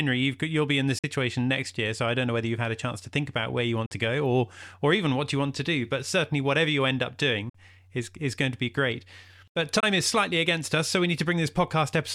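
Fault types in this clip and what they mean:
Bluetooth dropout: The speech cuts to silence four times, at 0.99, 3.86, 7.49 and 9.80 s. Three gaps last 46 ms, and the last lasts 23 ms. Late wireless packets were likely dropped. Speech resumes as if it had played on.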